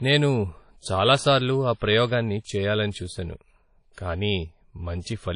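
Speech with plainly audible codec damage throughout, likely WMA compression. It sounds washy and ringing, nothing above 10.1 kHz, which fits a low bitrate near 32 kbps.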